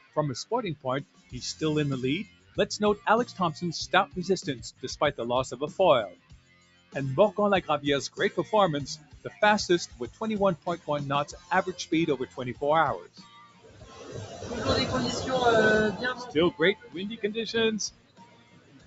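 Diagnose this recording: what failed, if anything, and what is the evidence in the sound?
The whole clip pumps and flutters: onsets mostly come through, but anything held or decaying sinks, with level swinging by roughly 20 dB. This is a noise suppressor applied to music or sounds, in the call processing stage. A speech-tuned suppressor was left running, so it treats steady tones, ambience and reverb tails as noise and pulls them down. That is why the audio thins out between attacks, even though the content above 8 kHz is absent only because of the call bandwidth.

The sound cut by the noise suppressor is heard as distinct dips where sustained or fading material collapses: 0.0 to 0.17 s, 0.76 to 1.34 s, 2.25 to 3.35 s, 6.09 to 6.95 s, a long stretch from 8.96 to 14.5 s, 16.19 to 17.24 s, and 17.89 s to the end. The deepest drops reach about 14 to 17 dB. In each case the suppressor judged the steady part to be noise and turned it down, while sharper transients survived.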